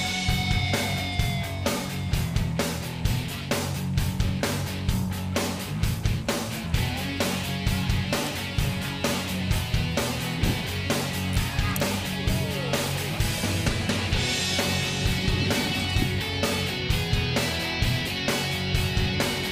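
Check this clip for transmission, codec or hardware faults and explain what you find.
One fault is audible: an electrical switching spike from 11.33 to 11.36 s. It is a sharp snap about 20 ms long, peaking around -20 dBFS and sitting on top of the sound rather than replacing it. The likely cause is a nearby switch, relay or static discharge arcing briefly, with the audio line coupling that burst of energy straight into the signal path.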